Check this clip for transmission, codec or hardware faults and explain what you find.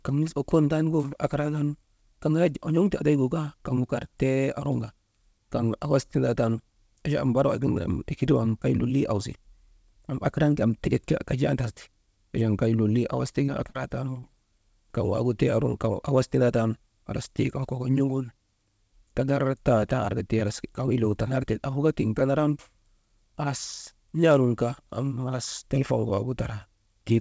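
There's one fault here, a short run of concealed packet loss, heard over a wideband call path with nothing above 8 kHz, which fits G.722 at 64 kbps.

Short concealed packet loss hits three times just after "achan kay lolii awas": 13.46–13.50 s, 13.70–13.76 s and 14.20–14.24 s. About 20 ms, 40 ms and 20 ms never arrived, and the receiver papered over each gap by extending the preceding sound, leaving quick smears or wobbles.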